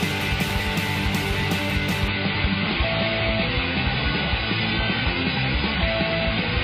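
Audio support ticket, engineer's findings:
Adaptive stream at a lower bitrate from 2.08 s to the end at 6.64 s. Sudden quality step, no gap. Treble gone above 5 kHz, codec artefacts rise. Points to the player switching to a much lower-bitrate AAC rendition, around 16 kbit/s, after the connection slowed.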